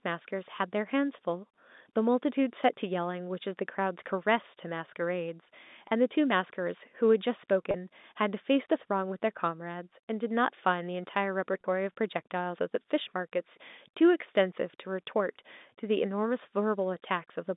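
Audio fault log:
5.88–5.91 s, 7.71–7.74 s, 11.61–11.64 s: packet loss with pitch repetition. Each 30 ms gap fits a single lost packet. The receiver bridges it by repeating the last pitch period, so the speech briefly holds on a slightly buzzy, sustained tone before normal audio resumes within the G.711 telephone band.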